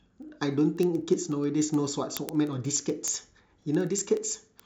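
From 0.10 s to the end of the speech, a train of word clock ticks runs at a steady rate of roughly one every 70 ms, around seventy in all. The receiving device is clocking a digital link on its own clock, a few hundred parts per million off the sender's. Each time the two clocks slip, a single sample is dropped or repeated, giving a sharp, uneven-strength tick. Unlike random crackle or dropouts, the ticks keep a metronomic spacing and leave no gap.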